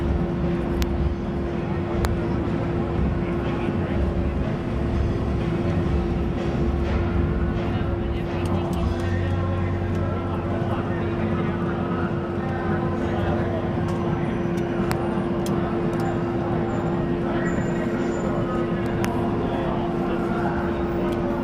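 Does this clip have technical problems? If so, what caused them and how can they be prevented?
Yes. Four violent, sharp cracks occur at 0.82, 2.05, 14.92 and 19.05 s. These are integer overflow: loud peaks pushed only about 0 to 1 dB past the integer limit wrapped to the opposite sign instead of being held there. To prevent this, use saturating arithmetic or a limiter before conversion, or keep more headroom in the gain stages.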